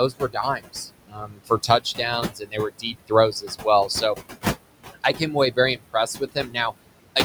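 Noise suppressor artifacts run through the whole clip. The suppressor pulls down the bands it judges to be steady noise, frame by frame, by as much as about 21 dB. The room noise, sitting about 11 dB below the speech, therefore sinks in the gaps and swells back under the voice.

Speech cut by the noise suppressor appears from 0.1 to 4.2 s. Here the suppressor mistakes parts of the speech for noise and turns them down with the background, again by up to about 21 dB. In total, roughly a second and a half is affected. The affected parts sound swallowed or faint. From 4.94 to 6.73 s the same thing happens more briefly, over about half a second in all, and quiet parts fade out.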